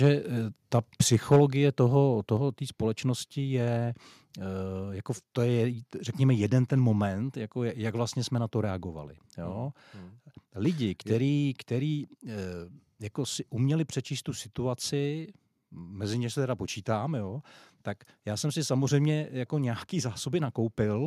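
A harsh, crackling edge marks the speech from 0.03 to 0.08 s and again, more heavily, from 0.74 to 1.41 s. This is microphone overload, likely from input gain pushing peaks about 1 dB and then about 6 dB past the converter's ceiling, squaring off a small share of samples. At 1.36 s and 2.37 s the speech and background fall abruptly in level, by about 2 dB and then about 4 dB. This is the microphone volume stepped down, likely the call software cutting device input gain in one step after sensing clipping, the first cut coming just as the second distorted stretch ends.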